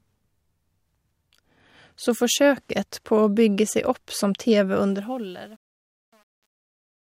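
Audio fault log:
4.88–7.03 s, truncation distortion on a fade: the fade-out grows gritty, worst after 5.2 s, which fits an undithered 9-bit stage; the waveform shows square steps and the spectrogram broadband hash.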